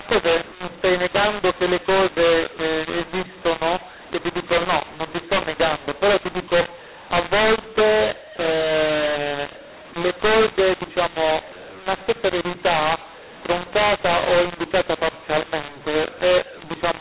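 From start to finish the speech carries a mu-law and A-law mix-up. Mu-law telephone samples decoded as A-law scramble levels, so the speech sounds harsh and gritty and pauses hiss. The waveform shows a raised noise floor, and the spectrogram fills gaps below the normal 4 kHz G.711 ceiling.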